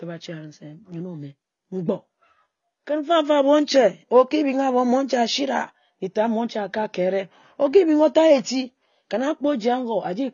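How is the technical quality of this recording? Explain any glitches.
The recording has audible codec damage running through the whole clip, consistent with AAC compression. From start to finish the speech has nothing above 6.9 kHz, so it sounds dull and lacks air, and sibilants and sustained sounds carry a smeared, warbling, fizzy texture. The likely cause is low-bitrate AAC-LC encoding, plausibly around 24 kbps. At that rate the encoder lowers its cut-off and spends too few bits on each frame's frequency lines, leaving spectral gaps that shift from frame to frame.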